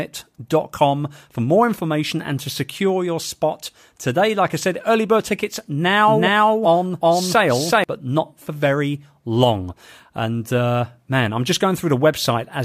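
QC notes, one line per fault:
6.08–7.84 s, doubled audio track: after "said early bird tickets" a dry, full-band second copy of the speech runs roughly 0.4 s behind at about equal level, cutting in and out abruptly before "but not for very"; likely a duplicate capture path or misaligned edit.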